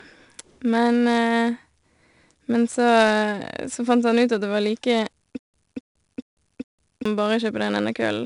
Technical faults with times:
0.00-8.26 4-bit ADPCM compression
5.39-7.05 stutter with silent gaps

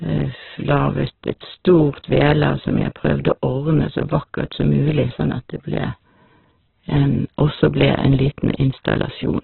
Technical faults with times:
0.00-9.43 Opus compression

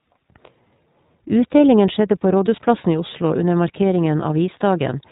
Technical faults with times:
0.00-5.11 iLBC codec

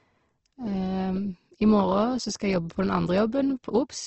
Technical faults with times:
0.00-4.06 Opus compression

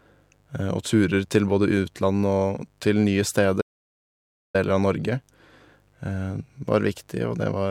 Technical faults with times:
0.00-7.70 mains buzz
3.62-4.54 audio dropout to silence

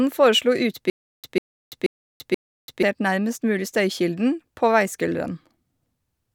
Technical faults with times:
0.90-2.83 stutter with silent gaps

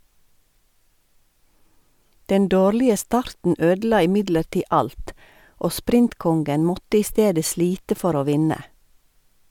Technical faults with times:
none

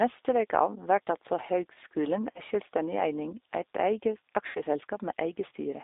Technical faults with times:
0.00-5.83 G.729 codec
2.31-2.41 VoIP packet loss concealed by the speech codec
4.47-4.60 VoIP packet loss concealed by the speech codec

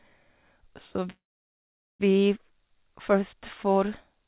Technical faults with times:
1.10-2.01 call audio freeze

